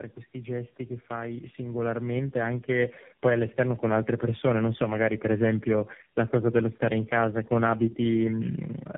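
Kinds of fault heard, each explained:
Tandem speech coding: The speech has passed through three low-rate speech coders in succession, with decoding and re-encoding at each link boundary, so each stage models an already degraded signal. In this clip the result is rougher, more muffled and more warbly than a single coder would produce. The band stops at about 3.8 kHz, which fits a narrowband final stage such as AMR-NB. The degradation persists throughout the clip.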